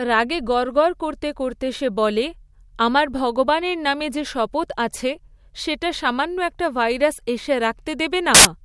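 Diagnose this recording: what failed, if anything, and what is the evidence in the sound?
At 8.35 to 8.45 s, near the end of the speech, a hard-edged burst of very loud white noise cuts in: file tags played as audio. The player decoded an embedded cover picture's compressed bytes as samples. The waveform shows a dense rectangular block, and the spectrogram a flat, broadband slab.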